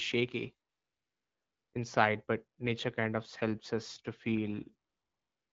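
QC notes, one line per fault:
0.69–1.73 s (ending before "inside but nature kind") and 4.89–5.52 s, AMR comfort noise: the real background gives way to steady, smooth hiss while the phone sends no speech frames and the receiver synthesises filler.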